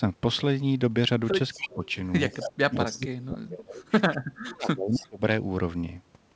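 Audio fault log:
1.53–1.74 s, 2.29–2.45 s, 2.85–3.07 s and 4.92–5.03 s, echo leak: a second, delayed copy of the speech returns 269 ms behind the original, first about 10 dB under it, then about 15 dB twice and about 20 dB at the last. The fixed lag marks it as a loudspeaker echo that the canceller likely failed to remove, not room reverberation, which would smear continuously rather than repeat as a discrete delayed copy.
1.56–1.82 s, 2.32–3.84 s and 4.00–5.24 s, speech suppressed in double talk: the speech is pulled down while echo is also present, by roughly 15 dB in the first stretch and as much as roughly 35 dB in the later two, for about a fifth of a second, one and a half seconds and one second in total. The likely cause is the echo canceller treating the talker and the loudspeaker echo as one and attenuating both. Throughout, nothing above 8 kHz is present, which fits a G.722 call path at 64 kbps.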